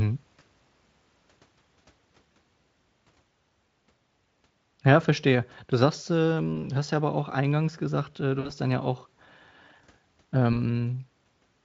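Packets dropped from the VoIP stream four times, and the speech codec's loss concealment filled each gap by extending its last pitch and filter with falling gain. A single lost frame, about 20 ms, hits at 0.39 to 0.41 s and again at 6.55 to 6.58 s, just before "du hast ja aber". Three frames go between "auch eingangs gesagt äh" and "dann ja auch", at 8.39 to 8.50 s. One more is lost at 10.53 to 10.60 s. Each leaves a brief stretched, buzzy or noisy fill, longest in the three-frame gap, while the Speex coding around it sounds clean or only faintly coloured, which points to a fairly high quality setting.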